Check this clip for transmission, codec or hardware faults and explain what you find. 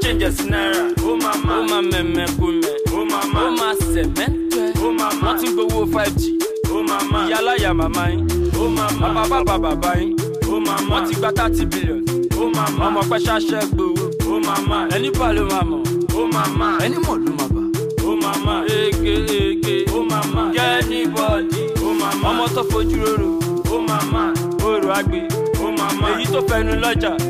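Checking this clip turns up nothing to explain.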